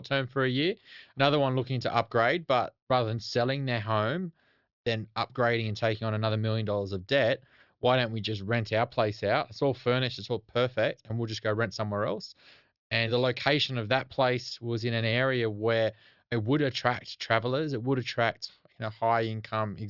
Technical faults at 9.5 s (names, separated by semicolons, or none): none